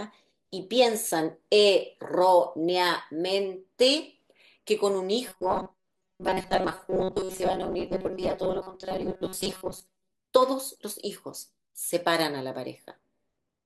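From 5.28 s to 10.11 s the speech takes on robotic sound from repeated short buffers: a rigid, metallic buzz at a fixed 188 Hz that tracks the speech contour only loosely. The likely cause is audio arriving too seldom, so playback fills the gaps by looping a very short stretch, about 5.3 ms to match the buzz, while the real signal is skipped. Repeated material makes up most of that span.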